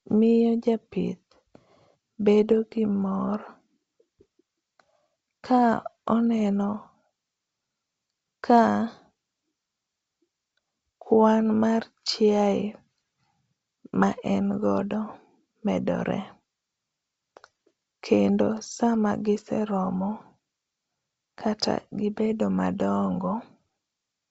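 No technical faults can be heard in this speech.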